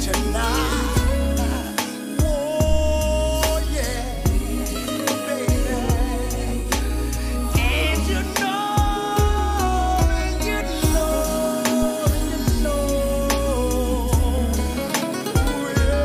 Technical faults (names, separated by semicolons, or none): phantom power thump